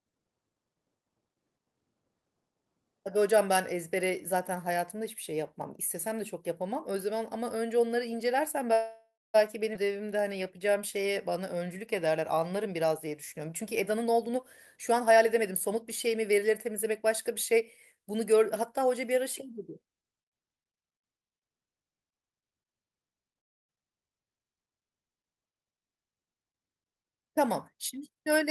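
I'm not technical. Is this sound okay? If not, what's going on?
No. This is a speech recording of a call whose audio stalls, jumps and changes speed in a few places.

From 8.73 to 9.36 s there is a call audio freeze: the sound stops for about 0.6 s, the last bit trails off, and about a quarter second is silent. Again from 23.38 to 23.71 s it pauses for about 0.3 s, nearly all of it silence. The likely cause is delayed network data leaving the phone nothing to play, so it waits. Nothing is lost; the speech resumes where it stopped.

At 9.74 s there is a skip ahead: roughly a fifth of a second of speech is simply missing, and the sound jumps forward with almost no gap. That piece was dropped, either on the way or by the receiver, while later speech was already waiting.

From 9.85 to 12.41 s there is a jitter buffer slow-down. Speech plays at about 91% speed, with the same pitch but stretched, drawn-out sounds. 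The receiver was repeating tiny slices of sound to rebuild its reserve, adding about a quarter second overall.

Three jitter buffer speed-ups follow. From 13.52 to 14.35 s the speech runs at about 126%, from 14.76 to 18.31 s at about 111%, and from 26.33 to 28.17 s at about 117%. In each stretch it sounds hurried at an unchanged pitch, because the receiver trimmed small slices to cut an accumulated delay.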